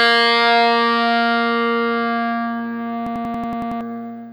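A system hang loop strikes from 3.07 to 3.81 s. The computer or its audio driver stalls, but the sound hardware keeps replaying the last ring buffer it was given. One 93 ms slice of audio repeats eight times at about 10.8 Hz, which fits a 4096-sample buffer. That is long enough to come through as a machine-gun stutter rather than a buzz. Roughly 0.7 s of the real sound never plays while the loop runs.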